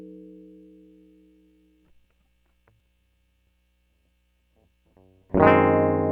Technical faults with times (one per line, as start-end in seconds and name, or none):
2.80 damaged data in a compressed stream
5.29-5.33 damaged data in a compressed stream